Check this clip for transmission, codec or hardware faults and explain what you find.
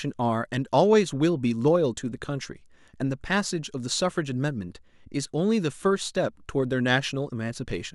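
Nothing wrong turns up anywhere in this speech recording.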